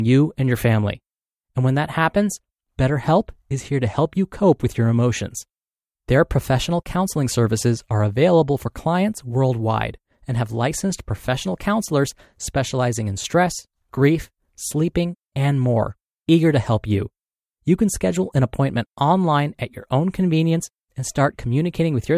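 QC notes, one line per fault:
No faults were found in the speech. Nothing in the audio calls for a QC entry.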